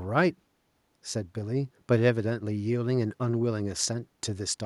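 Nothing in the recording stood out as a technical problem on listening.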